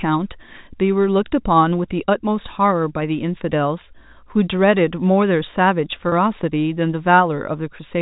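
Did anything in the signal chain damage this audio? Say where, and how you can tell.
Yes, there's packet loss with pitch repetition in the network stage, around 6.09 to 6.12 s. You get a brief held, slightly buzzy moment lasting about 30 ms, which fits a single lost packet. The receiver filled the gap by looping the last pitch period.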